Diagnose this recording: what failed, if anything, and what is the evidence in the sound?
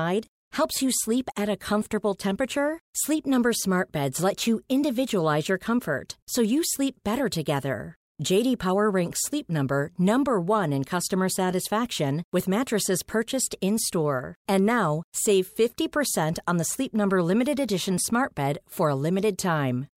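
Nothing failed in this speech recording. No stage from capture through to playback leaves any audible evidence of a problem.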